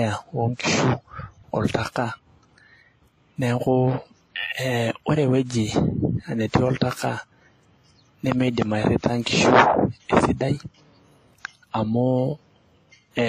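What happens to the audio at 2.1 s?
At 2.1 s the speech has two kinds of codec damage at once: the artefacts of a very low-bitrate encode, overlaid with a second layer of the later codec's own artefacts, and nothing above 14.8 kHz. This runs through the whole clip, not just that moment. The likely cause is transcoding between lossy codecs, consistent with a low-rate HE-AAC encode re-encoded to WMA, where the second codec wastes bits on the first one's artefacts and adds its own.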